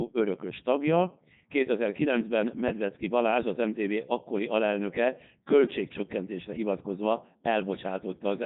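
From start to finish, the speech has passed through a Codec 2 vocoder, a low-rate digital-radio codec that transmits only pitch, voicing, energy and a spectral envelope rather than the waveform itself. The decoder rebuilds every sound from sine waves, and the damage is heavy: the voice comes out robotic and buzzy throughout, with the character of the sound pointing to Codec 2's highest mode, around 3.2 kbit/s.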